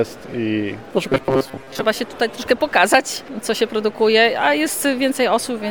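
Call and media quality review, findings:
Robotic sound from repeated short buffers, 1.09 to 1.84 s. Rigid metallic buzz at 134 Hz. Likely jitter buffer underrun: playback loops the last fragment, about 7.5 ms, covering roughly half the audio and skipping the rest.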